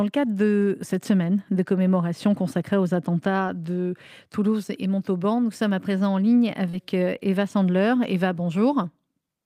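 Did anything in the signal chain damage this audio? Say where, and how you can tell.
Yes. Network packet loss, repaired by the Opus decoder. Lost packets were rebuilt from error correction at 0.61 s (after "le cadre"), 3.47 s (after "de commémoration consacrée aux"), 6.73 s and 8.03 s. Each leaves a 20 ms rough, noisier patch with no gap, unlike concealment.

Short concealed packet loss from 6.69 to 6.75 s, after "à présent en ligne". About 40 ms never arrived and was filled by extending the previous sound, giving a brief smear rather than a rough copy.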